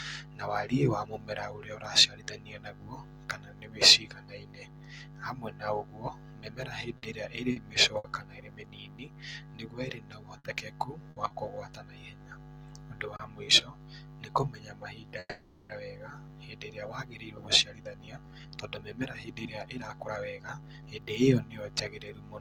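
Between 6.97 and 8.07 s, and again from 10.38 to 11.33 s, repeated packet loss left three gaps of up to 60 ms in each stretch, patched by extending the last sound, giving choppy, robotic speech with small pieces missing. From 13.16 to 13.22 s, a short stall from a late packet emptied the jitter buffer, so the receiver held the sound about 30 ms too long before continuing intact. From 15.20 to 15.73 s, a call audio freeze stretches the last sound into a fading buzz for about half a second, ending in brief silence. Packets held up in transit likely drained the buffer, and nothing is lost. From 17.37 to 21.07 s, a jitter buffer speed-up trims short pitch-period pieces, removing roughly half a second so speech runs about 13% faster at unchanged pitch and sounds hurried.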